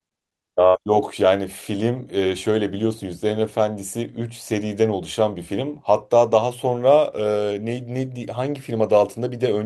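At 0.67 s the speech smears into a brief held, fading tone lasting about 65 ms, then jumps ahead at 0.81 s with about 60 ms missing. This is a burst of packet loss: the receiver extended the last audio while softening it, then resumed later.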